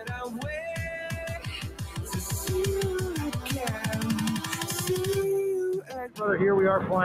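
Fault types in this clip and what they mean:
noise suppressor applied to music or sounds: a speech-tuned suppressor stays active throughout, treating steady tones and tails as noise, so the level pumps, swinging around 10 dB.
sound cut by the noise suppressor: the suppressor mistook this sound for noise, sinking it about 8 dB at 1.68–2.0 s and about 13 dB at 5.81–6.2 s.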